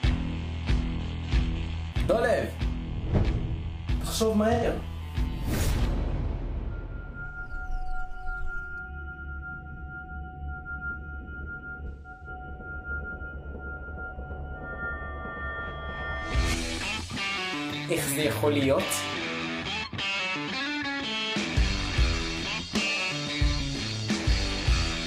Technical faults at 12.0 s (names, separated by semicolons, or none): AAC frame loss with concealment